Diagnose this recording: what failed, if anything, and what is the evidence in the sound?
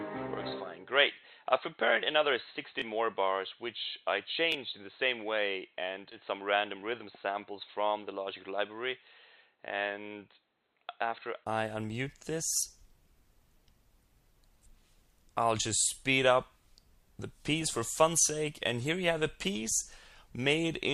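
For the first 11.47 s the sound is dull and band-limited, with nothing above 4.1 kHz, about 5 dB quieter, and carrying a faint extra noise floor. At 11.47 s a 20 ms silence is followed by full bandwidth. This is likely an input switched to a poorer device at the driver stage.

Three brief stutters occur at 2.80, 4.52 and 6.81 s. In each, a 21 ms piece plays twice with a hard join, which fits a 1024-sample buffer. This is a repeated buffer: the driver or buffer stage ran dry and replayed the last block instead of waiting for new audio.

At 6.11 s the sound jumps abruptly forward, with no gap, and roughly 400 ms is missing across the join. This is a skip ahead at the network stage. A stretch of audio was dropped while later audio was already waiting.

From 6.21 to 7.36 s the sound runs about 10% fast at unchanged pitch and feels hurried. This is a jitter buffer speed-up. The receiver trimmed short pitch-period pieces repeatedly, removing roughly 150 ms, to shrink excess buffered delay.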